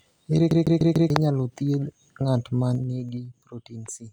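From 0.51 s to 1.10 s the speech is caught in a CD stuck on one turn. The same slice of about 148 ms repeats four times, as if a scratch keeps throwing the laser back by one track at the same point on every revolution. Each jump back leaves a brief mute, so the passage turns into a fast, regular stutter. The speech cannot move forward until playback finally clears the loop.

Between 2.71 s and 3.29 s the level falls by roughly 10 dB. The drop comes in 2 dB steps at around ten per second instead of as a continuous ramp. Each step changes the gain abruptly with no smoothing, and each one leaves a small click. Together they form zipper noise, a quick ticking that sits on top of the speech for as long as the level is moving.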